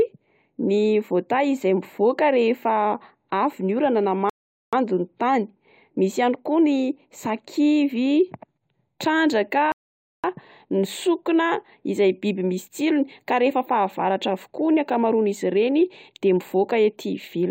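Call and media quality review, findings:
Rebuffering stall, 4.30–4.73 s and 9.72–10.24 s. Speech drops to silence, then picks up exactly where it stopped, with no content skipped. Player-side buffer underrun: playback drained the downloaded audio and halted until more arrived. Adds about 0.43 s and 0.52 s of dead air respectively. Suspect delivery throughput falling below the playback rate at both points. Check network/CDN delivery and the player's buffer target.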